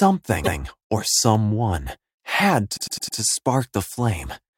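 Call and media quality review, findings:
Repeated frames, 0.43–0.59 s. Encoder output or packet path resent a block of compressed frames, about 157 ms of audio, one extra time. Decoder replays it: a single stutter, clip lengthened by 157 ms.

Repeated frames, 2.76–3.18 s. Same fault, worse: a 105 ms block delivered four extra times. Heard as a rapid four-fold stammer of the same sound, 418 ms of time added.

Dropped samples, 1.35 s. Likely a sample-level gap at a buffer or clock handoff, only a tiny fraction of a millisecond missing. Waveform jumps discontinuously: one sharp click, nothing audibly lost.

Dropped samples, 2.86 s. Likely the same buffer-boundary slip, again a fraction of a millisecond. Single sharp click, falling inside the repeated-frames stutter at 2.76–3.18 s.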